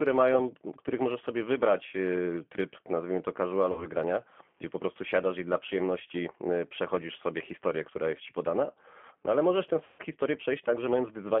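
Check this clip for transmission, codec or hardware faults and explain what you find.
Two faults show up: the whole clip has been through a low-rate speech codec, and it has two packet-loss gaps that the codec papered over.

G.729 codec, throughout: everything sits in a narrow 200 Hz to 3.4 kHz band, and the speech has that rough, slightly synthetic edge you get when a filter-and-pulses model rebuilds the voice. This fits G.729A at 8 kbit/s, and the damage is plainly audible.

VoIP packet loss concealed by the speech codec, at 3.72 to 3.87 s and 9.84 to 10.02 s: audio went missing, about 60 ms the first time and 150 ms the second. That fits roughly two and five packets. The decoder stretched its last pitch and filter with falling gain, so each gap is stretched out and fades, and the speech stays weak for a moment after it returns.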